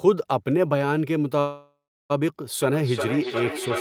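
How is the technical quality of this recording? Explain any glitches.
The recording has two clear technical faults, both after the first second.

From 1.39 s to 2.12 s there is a call audio freeze. The last sound is stretched into a fading buzz that sinks to silence for about 340 ms. Then the audio resumes exactly where it stopped, with nothing lost. The likely cause is packets delayed in transit, leaving the jitter buffer empty. The receiver filled about 0.7 s, so everything after it plays about 0.7 s late.

From 2.61 s to the end there is feedback echo between two devices. Speech comes back at intervals of roughly 0.4 s, with the repeats peaking at about 4 dB below the direct speech. The cause is a loop between two devices in the same room. One device plays the other's microphone signal, and that microphone picks it up again. Each device's echo canceller removes only its own playback, so this returned copy gets through.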